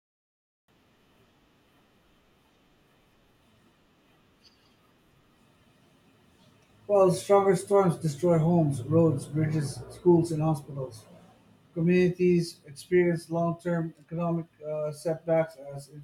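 Nothing in the recording stood out as a technical fault on listening.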